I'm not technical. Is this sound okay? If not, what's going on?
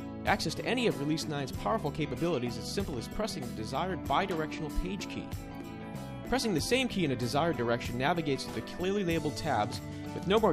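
Yes, nothing here sounds wrong; it's fine.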